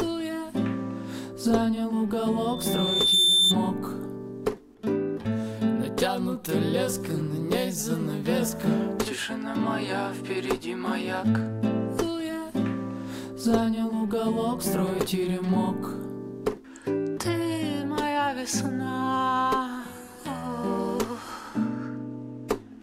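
From 2.41 to 3.57 s, a microphone picked up its own loudspeaker and the loop gain passed one at 3.6 kHz, causing loudspeaker feedback squeal: a pure tone swells over roughly three-quarters of a second into a piercing whistle, ending up about 10 dB above the surrounding sound.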